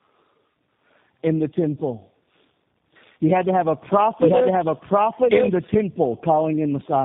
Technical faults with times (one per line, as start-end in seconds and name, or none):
0.00-7.04 tandem speech coding
4.20-5.72 doubled audio track